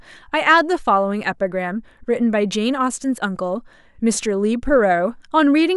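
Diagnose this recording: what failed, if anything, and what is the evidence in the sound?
Nothing failed; no stage of this speech shows faults.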